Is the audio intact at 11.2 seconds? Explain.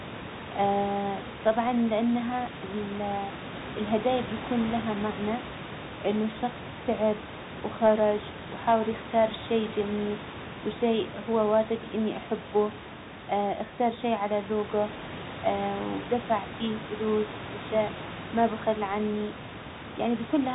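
No. At 11.2 s, as across the whole clip, the speech carries Bluetooth CVSD headset codec damage, and it is plainly audible. The codec encodes only whether each sample steps up or down, with an adaptive step size, so loud high-frequency sounds outrun it. S sounds turn scratchy, and a granular hiss sits under the speech, with room noise about 14 dB down. A spectrogram shows a hard ceiling at 4 kHz, and the waveform shows slope-limited, rounded transients.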